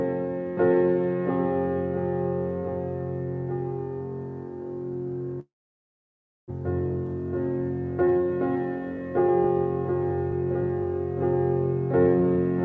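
From 5.40 to 6.52 s the sound breaks off, likely from a long network dropout. The last sound is stretched into a fading buzz or hiss, then near silence remains. When audio returns, about 600 ms of material is simply gone.

From 12.03 s to the end, a jitter buffer speed-up follows, as the buffer sheds extra held audio. Short pitch-period pieces are cut repeatedly, about 50 ms in all. Playback runs at 107 percent, same pitch, sounding hurried.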